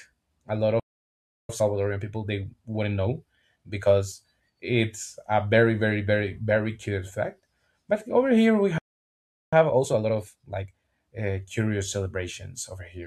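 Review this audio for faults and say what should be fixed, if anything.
Playback stall: the player likely ran out of buffered data or was blocked, so the speech drops to silence after "a lot" from 0.80 to 1.49 s, and again from 8.78 to 9.53 s.

Time-compressed catch-up: to clear the backlog, the player cuts and cross-fades small pieces. This hurries the speech at unchanged pitch, at 1.1 times speed from 1.49 to 4.49 s, just before "it's a very very", and at 1.5 times from 9.53 to 11.01 s, ending at "uh curious".

A larger playback buffer with higher thread priority would prevent the stalls, and with no stalls the player would have no backlog to compress.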